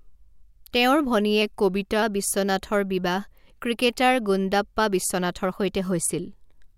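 From 1.42 to 2.02 s the speech slows by 5.5% and drops nearly a semitone, then snaps back. A drift correction step likely caused it.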